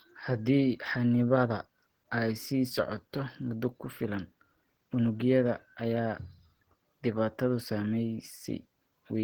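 From start to finish the speech has a muffled, hoarse, grainy edge, and the damage is plainly audible. That's most likely Opus compression in its hybrid speech mode, which fits a starved bitrate around 16 kbps, though content still reaches about 20.1 kHz.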